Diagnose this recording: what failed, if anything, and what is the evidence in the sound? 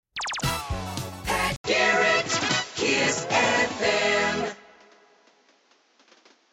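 At 1.56 s the input was likely switched to a poorer device at the driver stage: an 80 ms gap, then a duller sound to the end with nothing above 7.6 kHz, a level shift of a few decibels, and a new, faint noise floor. The spectrogram shows a gap and a sharp top cutoff.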